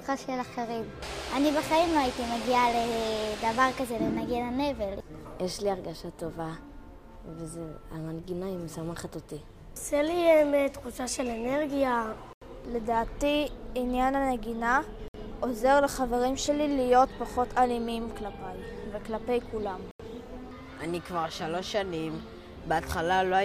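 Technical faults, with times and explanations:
12.33–12.42 s, 15.08–15.14 s and 19.91–20.00 s, Bluetooth stall: the audio cuts to silence for 84, 61 and 83 ms, likely the headphones' buffer running dry while interference held up packets.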